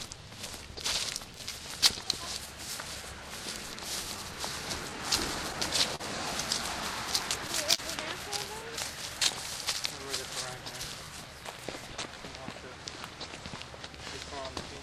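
Throughout the clip there is clock drift between sender and receiver: the sender's clock runs slow, by roughly 3 percent, so audio arrives more slowly than the receiver plays it out. The jitter buffer keeps draining, and the receiver has to pad the stream again and again to keep from running dry. The result is a faint, uneven unsteadiness in the timing of these everyday sounds rather than any single obvious break.

From 0.10 to 4.91 s come repeated timing corrections. The receiver stretches the material to 98 percent speed, repeating short slices here and there and adding something like 150 ms in total. All the edits push the same way but fall at irregular spacing, so the sound seems to drag slightly, with small hiccups where a slice is doubled.

At 5.96 to 6.02 s there is a short stall from a late packet. The packet missed its slot, the buffer ran empty, and the receiver held the last sound for 40 ms until the data turned up, then carried on from the same point. 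Nothing is lost, but that moment hangs a beat too long with a slight buzzy smear. The same happens at 7.75 to 7.80 s, this time a 37 ms hold, heard as another brief freeze in the sound.

From 8.71 to 14.79 s the repeated timing corrections return, a little stronger, at 97 percent speed, again adding around 150 ms through scattered repeated slices. The final stretch therefore feels marginally slowed, its pacing wobbling with light, irregular hitches.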